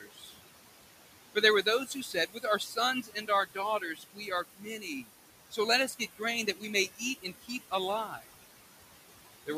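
Noise suppressor artifacts run through the whole clip. The suppressor pulls the room noise down by about 17 dB between phrases, then lets it rise under the speech. That room noise, about 14 dB below the speech, pumps in and out.

Speech cut by the noise suppressor comes in five stretches: 0.0 to 0.4 s, 1.35 to 5.09 s, 5.51 to 6.21 s, 6.96 to 7.73 s, and 8.07 to 8.24 s. The suppressor takes soft speech for noise. Quiet parts drop by up to about 17 dB and sound swallowed. The long second stretch loses about a second and a half.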